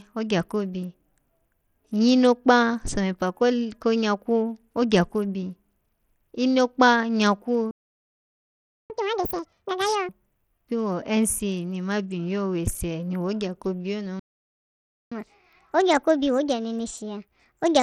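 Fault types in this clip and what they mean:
Bluetooth SBC compression: Heard throughout the 18-second clip, this speech has the sound of a small SBC bit pool, which fits a link running near 80 kbps, so the damage is plainly audible. SBC likely splits the signal into a few broad sub-bands and spends its scarce bits on the strongest ones. The upper bands are starved or coarsely quantised, so the treble thins and flickers while a gritty, aliased noise rides on the speech.
playback stall: From 7.71 to 8.90 s, about 1.19 s, and again from 14.19 to 15.12 s, about 0.92 s, the speech cuts out in mid-flow and the output goes silent. The player has likely run dry of buffered data or had its audio thread blocked, so nothing reaches the output until it recovers. Each time the speech resumes from roughly where it stopped, which tells the listener that the missing audio was delayed and not dropped.
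catch-up at higher speed: Right after each stall the player races through its backlog. From 8.90 to 10.09 s the speech runs at twice normal speed, with pitch raised by roughly 10 semitones. From 15.12 s to the end it runs 1.25 times fast, a few semitones sharp. The player resamples the queued audio instead of time-stretching it, so speed and pitch climb together while it wins back some of the lost time.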